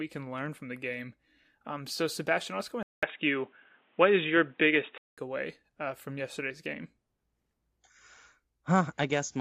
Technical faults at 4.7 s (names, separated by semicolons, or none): input switched to a poorer device